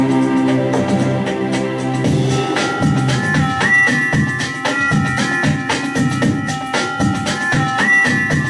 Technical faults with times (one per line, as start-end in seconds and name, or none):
none